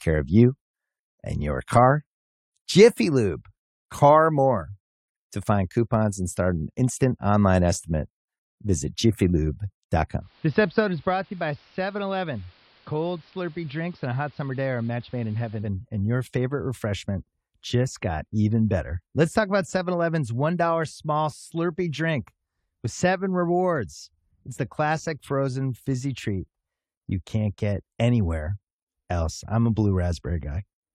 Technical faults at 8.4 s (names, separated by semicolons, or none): none